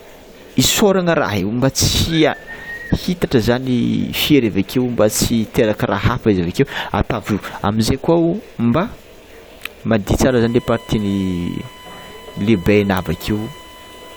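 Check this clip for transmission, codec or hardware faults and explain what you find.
One hardware fault is present. From 10.29 s to the end, USB whine: a steady 1 kHz tone, about 25 dB below the speech, from 1 ms USB frame current leaking through power or ground.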